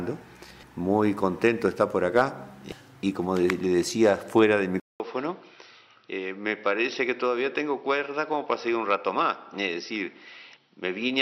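At 4.80 s there's a gap of about 200 ms, then the sound comes back duller, a few dB quieter, with nothing above 5.8 kHz and a faint new noise floor. That's likely the input switched to a poorer device, and it stays that way to the end.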